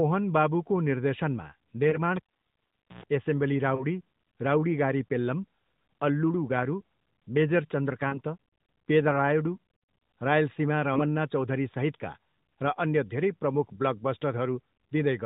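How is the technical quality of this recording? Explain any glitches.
The recording has been through a mobile phone channel and has two kinds of glitch: several dropped speech frames and one cable pull. Everything sits below 4 kHz, as you'd expect from the AMR narrowband codec, and its light coding, which fits the 12.2 kbps mode, adds little roughness of its own.

Lost AMR speech frames show up at about 1.9 s, right after "बाबुको निर्देशनमा", then at 3.8 s, 8.08 to 8.19 s and 10.94 s. Each is a single 20 ms frame except the one at 8.1 s, where two consecutive frames go for 40 ms. Radio errors corrupted those frames, so the decoder filled the gap by repeating the last good pitch and vocal tract settings at lower gain. You hear a brief dip or warble, slightly longer at 8.1 s.

The cable pulled and plugged in runs from 2.16 to 3.04 s. There's a pop as the connection breaks, then about 0.82 s of near silence. 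As the plug goes back in, the tip touches first and lets through a burst of 60 Hz mains buzz lasting about 0.11 s. A second pop follows as the signal comes back.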